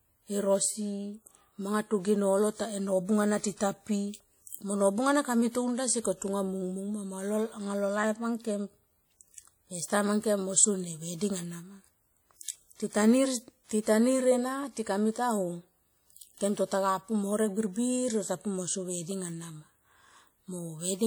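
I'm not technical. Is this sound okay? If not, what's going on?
No, not quite. All the way through, the speech has a swirly, ringing edge, with a hiss that swells and fades along with the talking. That's compression damage, most likely WMA compression squeezed down hard, smearing detail and dropping quieter parts of the sound.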